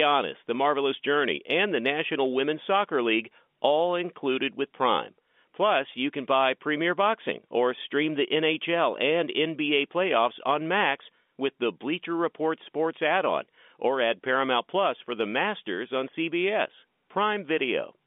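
No technical faults can be heard in the speech. It carries the narrow band of G.711 telephone coding, confined to about 200 Hz to 3.6 kHz, with at most a faint quantisation hiss that rises and falls with the level.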